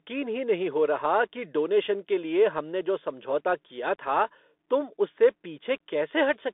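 A speech clip that's been through a Bluetooth CVSD headset codec for the whole length, and you can plainly hear it. The band sits at roughly 250 Hz to 3.6 kHz with nothing above 3.8 kHz, which fits a 64 kbps CVSD link. That scheme sends one up-or-down bit per sample with an adapting step, so sharp high bursts outrun it: the s sounds come out scratchy, and there's a grainy hiss sitting under everything.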